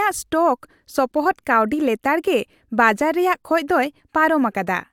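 No technical faults can be heard anywhere in the recording. There is no moment in the speech that needs a timestamp or an explanation.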